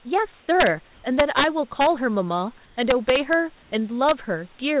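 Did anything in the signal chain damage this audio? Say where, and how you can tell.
Yes, at two stages.

Integer overflow, in sample-format conversion or a gain stage, produces violent cracks at 0.60–0.67, 1.20–1.44, 1.81–1.87, 2.91–3.33 and 4.09–4.11 s. On the waveform, loud peaks jump straight to the opposite sign instead of flattening. On the spectrogram, they appear as sharp broadband vertical streaks.

In call processing, the room background briefly turns into steady, featureless hiss at 0.40–0.48, 0.94–1.04, 2.66–2.76 and 3.62–3.72 s, shifting level by about 1 to 2 dB. This is likely comfort noise in place of the background during discontinuous transmission. The spectrogram shows smooth, uniform patches beneath the call's 4 kHz ceiling.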